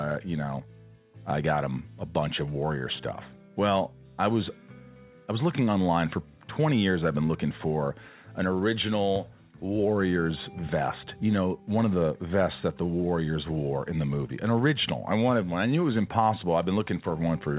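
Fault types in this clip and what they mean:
Nothing here counts as a fault: the audio comes over an ordinary call line, with the top end stopping at about 4 kHz as you'd expect from a standard phone-grade codec like G.711.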